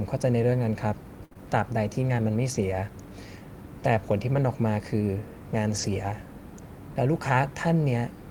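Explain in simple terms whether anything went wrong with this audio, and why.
A burst of packet loss hits at 1.25 to 1.38 s. Sound stopped arriving there. The receiver stretched the last sound for about 54 ms, fading it out. Then about 60 ms of real audio is simply gone, and the sound jumps ahead.

A short concealed packet loss sits inside that stretch, at 1.33 to 1.37 s. About 20 ms more went missing. The receiver patched it by continuing the sound for about 21 ms, then blended back. It comes across as a tiny smear.

A lost packet rebuilt from error correction shows up three times: 2.52 to 2.62 s, 4.34 to 4.40 s, and 5.70 to 5.88 s. Nothing drops out. Instead, a rough, lower-quality backup copy fills each spot, for 60, 40 and 100 ms. Those moments sound grainier and noisier.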